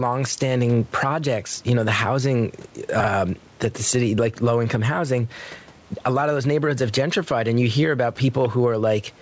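Across the whole clip the gain pumps, moving by something like ten decibels. Loud and quiet passages sit unnaturally close together, and the speech sounds squashed. This gain pumping likely comes from the input gain being set far too high, with a fast limiter or compressor clamping down on every loud sound and releasing in the gaps.

At 3.0 to 3.08 s, between "you know the housing" and "that the city like", the speech briefly jumbles. These are chunks out of order. A 40 ms block of audio arrived or was written one chunk late and plays after the chunk that should follow it. Nothing goes missing, but the wrong ordering leaves three hard joins, which produce the garbled moment.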